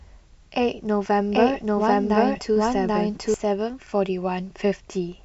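From 1.32 s to 3.34 s the speech plays twice at once, with a second full-band copy trailing roughly seven-tenths of a second behind at about the same loudness, dry and without any room decay, cutting in and out abruptly. This doubled audio track is likely from a second, slower capture path mixing in.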